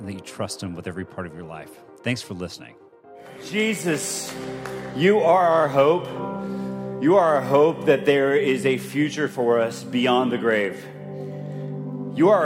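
No technical faults are audible.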